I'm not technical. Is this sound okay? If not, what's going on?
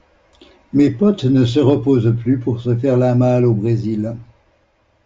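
Yes, nothing in this recording points to a technical problem with the signal.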